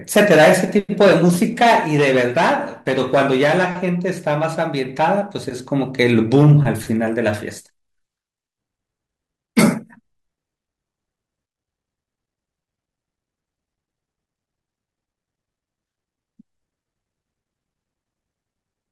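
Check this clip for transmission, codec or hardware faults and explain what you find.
No faults detected here.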